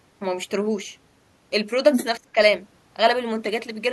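From 1.93 to 2.06 s the other side's voice leaks through, about as loud as the talker, likely loudspeaker echo the echo canceller didn't fully remove. Right after, from 2.17 to 2.37 s, the speech is suppressed in double talk: the talker's voice sinks by roughly 30 dB while the far end is talking, likely as the canceller turns everything down.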